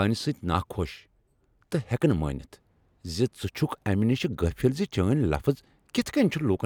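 No technical faults can be heard in this recording.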